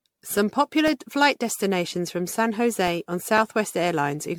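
Throughout the speech, the sound is swirly, smeared and hollow, with blurred consonant attacks and nothing above 19.6 kHz. This is generation loss, likely from around fifteen MP3 re-encodes near 100 kbit/s, each pass adding fresh quantisation noise and spectral holes.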